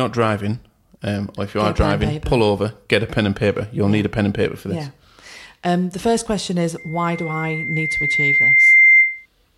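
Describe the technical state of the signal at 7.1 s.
At 7.1 s the microphone is picking up the loudspeaker it feeds, and at about 2.1 kHz the loop gain has passed one, so that frequency keeps growing on its own. This loudspeaker feedback squeal starts at 6.78 s, just after "the first question is", and lasts until 9.26 s. At 7.1 s the thin tone is still swelling. It takes roughly two seconds to become a piercing squeal, peaking about 10 dB above the speech.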